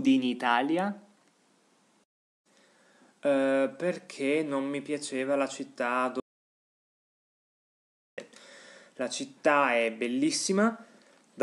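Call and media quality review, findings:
Audio dropout to silence, 6.20 to 8.18 s, about 1.98 s lost. Sound cuts off mid-flow, gap fully silent with no room tone, then resumes abruptly. Likely input loss upstream (device disconnect, failed link or mute) while the recorder kept writing silence.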